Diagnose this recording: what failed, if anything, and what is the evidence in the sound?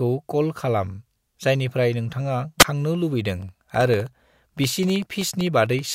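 At 2.59–2.65 s, a wireless microphone squelch dropout: the radio link fades, hiss rises, and the receiver's squelch mutes about 13 ms before speech returns.

From 3.42 to 5.86 s, periodic USB or driver dropouts: ticks every 64 ms, around forty, each a sub-millisecond gap of silence where the driver stalled.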